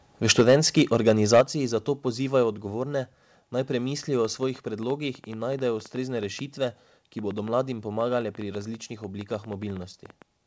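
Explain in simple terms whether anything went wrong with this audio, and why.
Three things go wrong, all early or late in the recording.

From 0.29 to 1.41 seconds the loudest syllables sound harsh and crackly. That is microphone overload. The input was likely set too high, so the strongest peaks ran past what the recorder could capture. Their tops got sliced flat. A small share of the sound was cut this way, but enough to add a rough, gritty edge.

Twice, at 0.41 and 1.41 seconds, the whole sound suddenly gets quieter in one step. This is the microphone volume stepped down. The call software likely noticed the crackling peaks and turned the microphone down to stop them. The second drop is larger than the first. Both voice and background fall together, which is why it sounds like someone reached for a knob.

After "odgovorne naj premislijo", from 4.25 seconds to the end, a train of clicks runs over the audio. 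There are about six or seven sharp ticks every second, coming at an uneven pace. They stand out clearly above the sound and keep going in the pauses too. They are likely interference from nearby equipment or a faulty connection or power supply injecting pulses.

The call connection itself carries the sound with a limited top end. Nothing above 8 kHz comes through.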